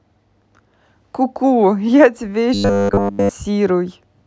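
Robotic sound from repeated short buffers hits this speech from 2.54 to 3.31 s: a rigid 100 Hz buzz, likely from the last 10 ms being repeated throughout.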